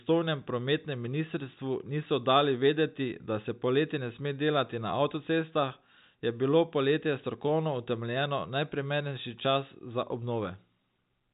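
The speech comes through a working G.711 telephone path, its band stopping at about 4 kHz as that format's 8 kHz sampling requires, with no technical fault anywhere in the signal.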